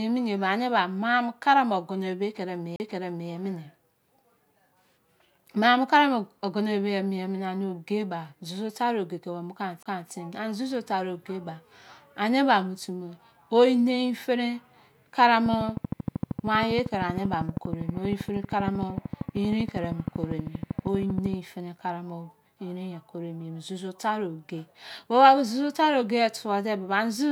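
Speech recording with two CD skips and a later train of clicks. At 2.76 s and again at 9.83 s, just after "tari oge ko ami", the laser jumps to another turn of the disc spiral. The player mutes briefly, roughly 40 ms and 30 ms, with a tick, then resumes elsewhere. The waveform shows a short flat gap and a discontinuity where the sound picks up from a different point. From 15.46 s to 21.34 s a regular train of clicks runs at 12.8 per second, about seventy in all, peaking about 10 dB above the speech. It is likely interference from nearby equipment. On a spectrogram these clicks appear as evenly spaced thin vertical lines spanning the full frequency range, and in the waveform as near-identical sharp spikes.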